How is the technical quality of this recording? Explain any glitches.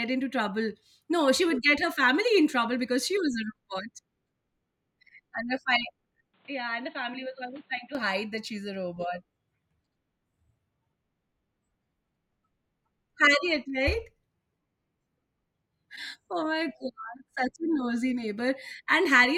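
One glitch stands out. From 6.34 to 7.95 s, just as "hide that she's a" begins, the speech turns dull and boxy. Nothing reaches above 4.3 kHz. It drops about 5 dB, with faint new background noise. The input likely switched to a poorer device.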